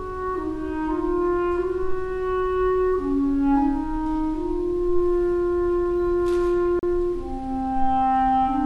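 At 6.79 to 6.83 s there's a CD skip: the laser hops to another track turn, so you hear a tick, a brief mute of about 40 ms, then a jump.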